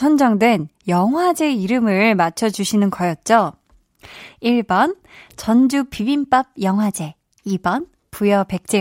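The speech signal holds steady throughout, with no dropouts, distortion or other technical faults to be heard.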